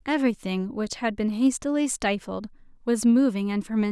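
Nothing stood out on listening to this speech recording.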